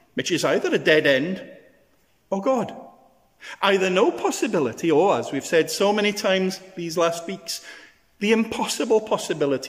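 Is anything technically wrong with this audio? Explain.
No, no technical faults heard.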